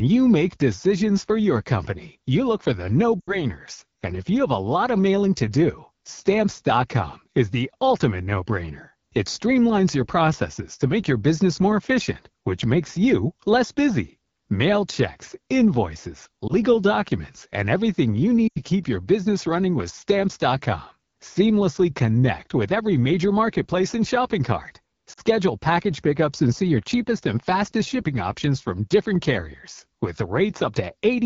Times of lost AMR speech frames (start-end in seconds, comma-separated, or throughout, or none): 3.20-3.39, 16.48-16.53, 18.48-18.60, 25.13-25.20